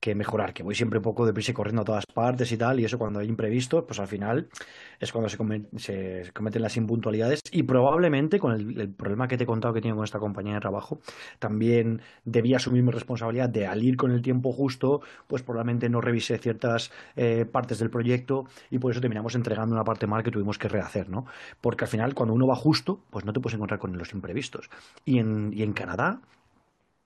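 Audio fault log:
2.05 s and 7.40 s: gap at a join of encoded pieces. The speech breaks for 45 ms, then 54 ms. Separately encoded pieces were joined untrimmed, so encoder start delay and last-frame padding remain. The edges are smeared by the codec. Speech resumes where it stopped.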